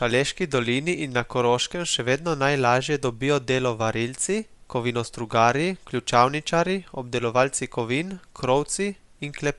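Throughout the speech, the spectrum stops at about 11.6 kHz, and the top of the band has a plainly audible breathy, grainy fizz. This is likely Bluetooth LC3 compression, fitting a 48 kbps stream. A plain low-pass would leave that region clean rather than noise-filled.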